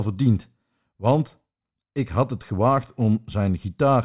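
No technical faults are audible.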